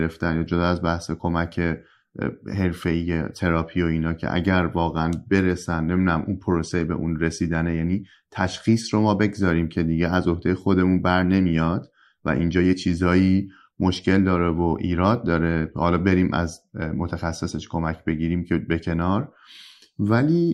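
Nothing technical stands out in this bit of recorded speech; it's a straightforward listen with no problems to point at.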